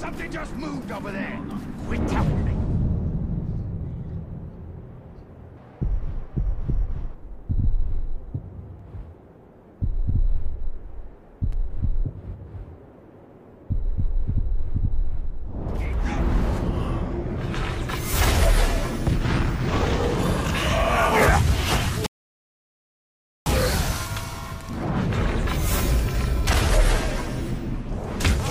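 From 5.57 to 7.15 s comes a section at the wrong speed. It runs 1.47 times fast and rises about seven semitones. Likely a playback clock mismatch.

At 22.06 s a rebuffering stall cuts to silence for 1.40 s. Playback resumes at 23.46 s exactly where it stopped, adding time without losing any.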